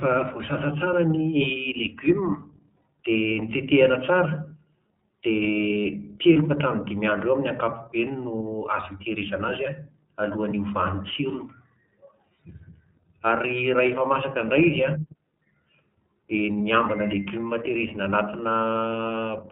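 iLBC codec coding runs through the whole clip. Each frame's excitation is coded on its own, and nothing above 4 kHz survives. The speech sounds band-limited, plainly rough and somewhat synthetic, which fits the 30 ms, 13.33 kbps mode.

Lost iLBC frames appear from 6.33 to 6.37 s. About 30 ms of audio is missing, which fits one dropped frame. The decoder fills it by repeating the last pitch cycle mixed with noise, heard as a brief buzzy held vowel, and the voice is right again almost immediately.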